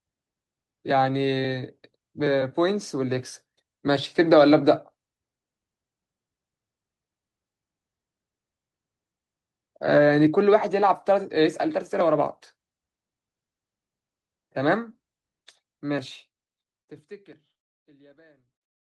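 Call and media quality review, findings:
No defects found: the speech carries the expected Opus call-path coding with content extending to about 12 kHz, and the level eases into a smooth fade-out from roughly 15.5 s with no click or hard edge.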